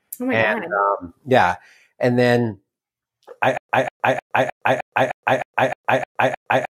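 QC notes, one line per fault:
3.58 s to end: stutter with silent gaps. A 190 ms fragment repeats ten times every 308 ms, with 117 ms of dead digital silence between repeats, likely a stalled stream replaying its last buffer. The silent gaps separate it from a seamless loop, and the underlying speech never resumes.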